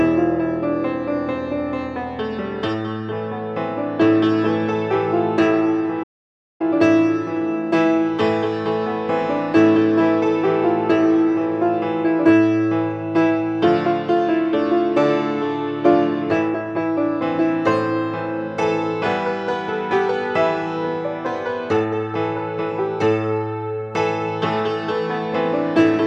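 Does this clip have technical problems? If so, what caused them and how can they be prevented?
Yes, there's a playback stall at 6.03 s: the sound cuts out mid-flow for about 0.57 s, resuming at 6.61 s. Likely the player starved for data or its thread got blocked. Bigger buffers and a higher-priority audio thread should prevent it.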